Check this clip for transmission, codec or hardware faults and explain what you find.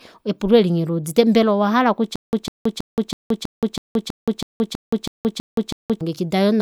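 One fault is present: stutter with silent gaps. From 2.16 to 6.01 s, after "mbela owahala", a 151 ms burst repeats 12 times, each followed by 173 ms of silence. This is likely a stalled stream replaying its last fragment.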